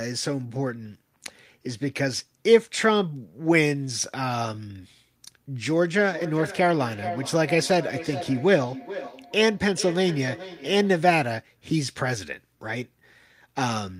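Feedback echo between two devices runs from 5.7 to 11.3 s, with the speech coming back at a steady interval of roughly 0.4 s. A second device in the same room is playing the call aloud, and the first microphone picks that playback up and sends it round again. Each device's echo canceller removes only its own output, so the loop goes unchecked. The returns are thin and ringing, peaking about 12 dB below the direct speech.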